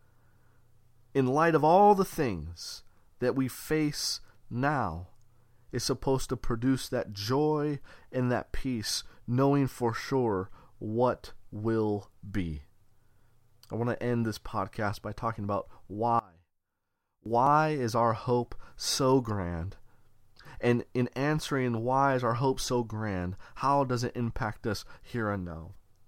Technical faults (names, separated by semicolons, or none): one channel inverted